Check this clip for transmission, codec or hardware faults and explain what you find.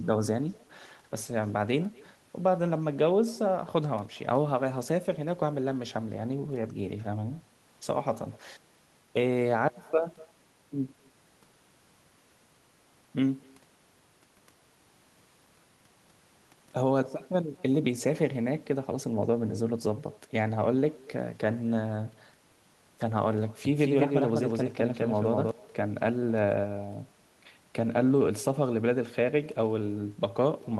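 Two faults are present: a faint echo throughout, and a briefly doubled track near the end.

Echo with no canceller runs through the whole clip. The far end is playing the call on a loudspeaker, and its microphone picks that sound up again. Nothing subtracts it before it is sent back. Each phrase returns about a fifth of a second later, after the network round trip. The copy sits about 26 dB below the speech. It is faint and thin, a shadow trailing the talker.

A doubled audio track appears from 23.65 s to 25.51 s. The same speech is mixed in twice, with one copy running behind the other by roughly a fifth of a second. The likely cause is a second, slower capture path or an edit that left two copies out of step. The late copy is only a few decibels quieter and covers the full band. It has no decay or room colour. It starts and stops abruptly at those two times.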